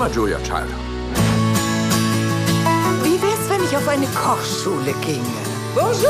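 No dropouts, clicks, distortion or level problems are audible anywhere in the clip.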